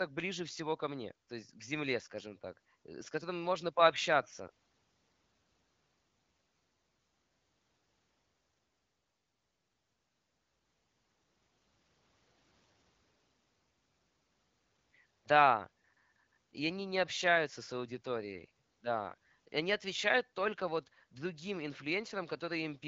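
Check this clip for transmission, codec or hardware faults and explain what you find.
Nothing faulty found: the speech runs over an AMR wideband (HD Voice) path at 12.65 kbit/s, whose light coding texture and band limit near 7 kHz are what that codec at that rate produces.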